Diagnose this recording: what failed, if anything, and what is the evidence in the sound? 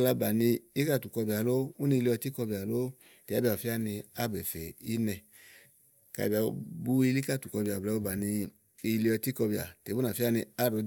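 Nothing failed: no stage in the chain, from wiring and conversion through processing, transmission and playback, leaves any audible evidence of a fault in the speech.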